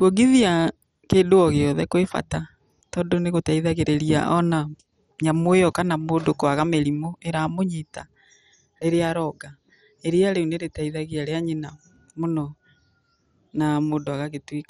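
Throughout, the speech sounds dull and gurgling, with nothing above 14.7 kHz. This is likely heavy MP2 compression at around 56 kbps; flickering, granular sub-bands distinguish it from a plain low-pass filter.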